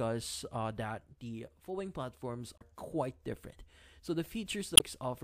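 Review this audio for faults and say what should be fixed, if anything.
There are two short bursts of damaged data in a compressed stream, at 2.58 to 2.62 s and 4.74 to 4.82 s, heard as brief blips. Corrupted bytes made the decoder misread those frames and lose sync while it hunted for the next header. Worth checksumming the file on transfer and re-fetching it from a clean source.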